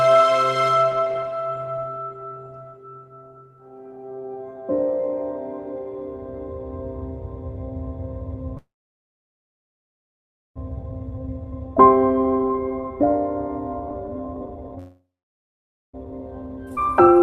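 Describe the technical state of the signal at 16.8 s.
At 16.8 s the jitter buffer, holding more audio than its target, is running a speed-up from 16.05 s to the end. It repeatedly removes short pitch-period pieces, about a third of a second in total. The audio plays at 123% speed with unchanged pitch and sounds hurried.

Just before that, between 16.75 and 16.79 s, a skip ahead occurs. Roughly a second of audio was dropped while later audio was already queued. Playback jumps forward across a bridge of only about 12 ms, so the material on either side is joined almost directly.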